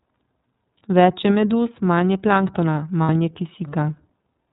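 Throughout, the speech carries plainly audible iLBC codec damage: nothing above 4 kHz, with a rough, synthetic edge consistent with its 13.33 kbps, 30 ms-frame mode, unlike smoother wideband codecs. From 3.03 to 3.10 s, lost iLBC frames leave a buzzy, held vowel-like fill, which fits two missing 30 ms frames. The voice returns almost at once afterward, unlike the lingering smear of codecs that depend on previous frames.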